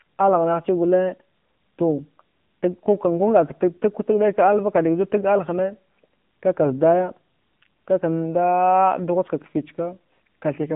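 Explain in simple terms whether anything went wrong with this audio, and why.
The speech passed through an AMR narrowband mobile codec throughout, as in an old phone call, leaving a thin voice with nothing above 3.6 kHz and a buzzy, synthetic edge.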